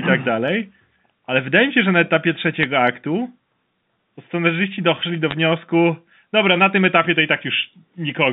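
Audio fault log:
2.61–2.63 s and 5.31 s: bit errors on a digital phone line. Two brief bursts of ticking crackle land just after "się że na etapie" and between "to scenarzyści doszli do" and "wniosku dobra na tym", with the error rate around 0.15 percent. On this G.711 A-law line (150 Hz–3.7 kHz band), each flipped bit corrupts one logarithmically coded sample, so the waveform shows isolated single-sample spikes, and the spectrogram shows thin vertical streaks across the band.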